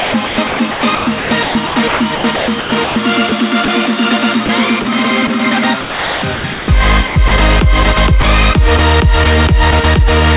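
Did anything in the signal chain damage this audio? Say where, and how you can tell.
Yes, in call processing: sound chopped by the voice detector at 0.0–3.68 s, 4.46–5.3 s and 5.81–7.31 s. Stretches of sound are replaced by comfort noise, likely from repeated send/stop switching rather than packet loss.

At 8.21–8.24 s, sound dropped by the voice detector: one 30 ms stretch becomes steady comfort noise, likely a quiet edge taken for background. It is a single gap, not repeated flicker.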